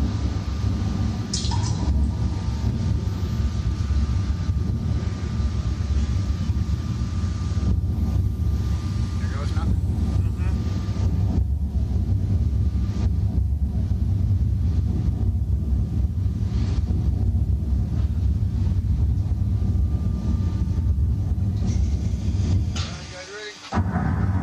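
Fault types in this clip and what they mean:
Damaged data in a compressed stream: corrupted bytes make the decoder misread frames and lose sync, giving two blips of about 50 ms at 2.65 s and 23.64 s. A spectrogram shows brief broadband smears breaking the surrounding pattern, and the waveform shows abrupt discontinuities there.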